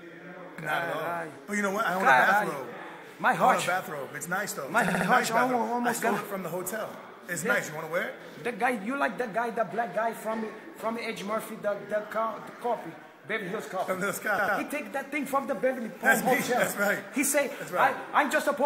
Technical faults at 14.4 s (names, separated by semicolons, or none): repeated frames